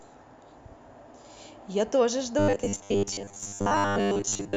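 From 2.39 s to 4.56 s the speech turns into a rigid, metallic buzz at 100 Hz. This is robotic sound from repeated short buffers, likely from 10 ms fragments repeating while most audio is skipped.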